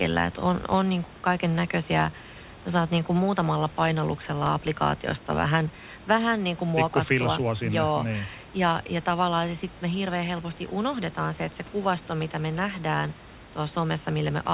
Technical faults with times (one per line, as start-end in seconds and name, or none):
none